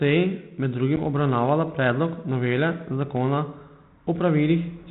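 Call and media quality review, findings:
Packet loss on an ADPCM call, 0.96 to 1.08 s: hard-edged silent gap of about one packet (10 ms), just before "obravnavala predlog novele zakona". The G.726 decoder's predictor and step size desync, so the audio resumes slightly distorted, settling over tens of milliseconds. A plain dropout would resume cleanly.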